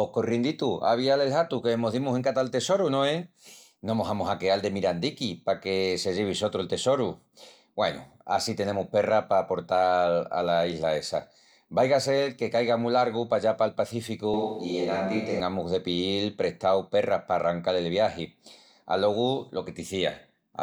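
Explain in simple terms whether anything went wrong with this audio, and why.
Something does go wrong, briefly. From 14.34 to 15.40 s, right after "mu largu pallá pal", the speech suddenly turns roomy and hollow with less low end, then snaps back before "de piíl prestau perras". That's likely a switch to a distant microphone.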